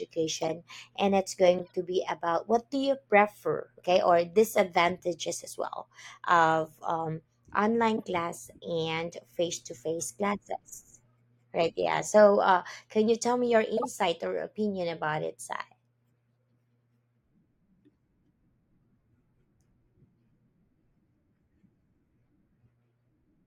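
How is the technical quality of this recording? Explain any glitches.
The recording has four short glitches, all corrupt frames decoded. At 0.41 to 0.50 s, 1.58 to 1.70 s, 7.96 to 8.04 s and 13.77 to 13.86 s, damaged compressed data was played back anyway, scattering energy into the wrong frequencies. Each sounds like a brief chirpy burst lasting a few frames, loudest near 13.8 s.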